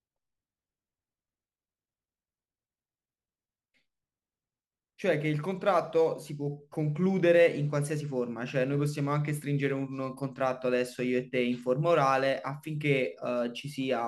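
Speech recording here; from about 5.13 s to the end there's sample clock jitter. The converter's clock wobbles by a few microseconds, so samples land early or late, giving a hissy roughness roughly 35 dB down that grows on loud, bright syllables and fades in pauses.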